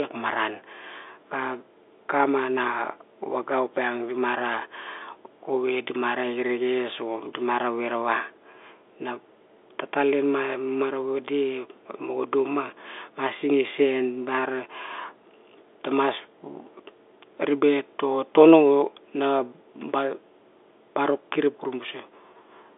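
No technical faults are present.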